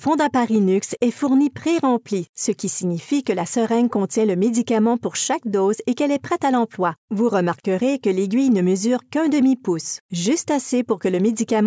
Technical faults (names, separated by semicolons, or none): none